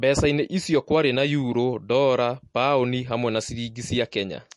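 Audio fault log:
Throughout, MP3 compression: nothing reaches above 11.3 kHz, and the speech carries plainly audible watery, swirling artefacts as weak frequency lines switch on and off between frames. The likely cause is MP3 encoding, with damage that fits a bitrate around 48 kbps.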